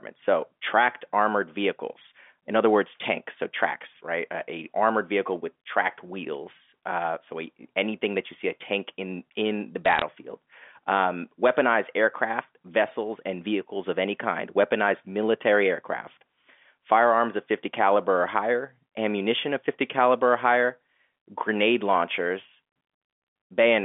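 From 9.86 to 10.02 s there's a short burst of bit errors on the digital phone line, where flipped bits corrupt single samples and leave sharp ticks and crackle over the telephone-band speech.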